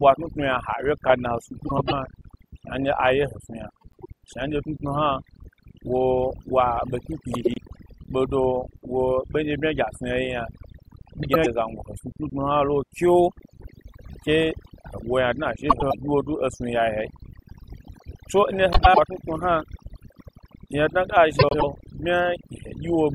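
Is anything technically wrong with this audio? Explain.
Yes. Overdone noise removal runs through the whole speech clip. The noise reducer was pushed so hard that any frequency band sitting near its noise estimate gets pulled far down or shut off, and the quieter parts of the voice are caught along with the noise. That leaves the background lowered and broken up into twinkling, warbling specks.

Frames out of order occurs seven times, at 1.67–1.93, 3.81–4.06, 7.34–7.58, 11.23–11.46, 15.69–15.94, 18.72–18.99 and 21.39–21.64 s. Each time, two adjacent runs of frames, each about 104.5 ms long and consistent with four frames, were decoded in swapped order. Roughly a quarter-second stretch plays with its halves exchanged, heard as a garbled flutter, though no time goes missing.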